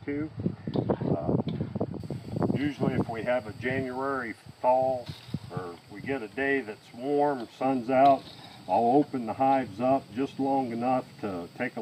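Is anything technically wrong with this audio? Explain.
Yes. From 0.0 to 2.0 s the audio shows de-emphasis applied wrongly: a treble-cut curve was applied to material with no matching pre-emphasis, rolling the response off smoothly to about 14 dB down at 10 kHz relative to 1 kHz. That stretch sounds dull and muffled.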